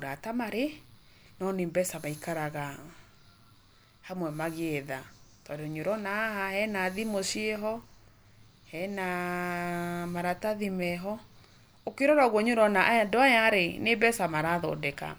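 Speech recording with no audible technical faults.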